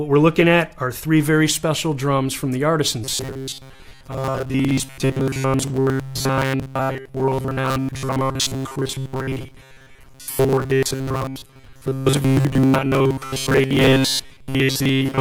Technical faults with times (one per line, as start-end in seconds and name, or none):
3.04-15.20 robotic sound from repeated short buffers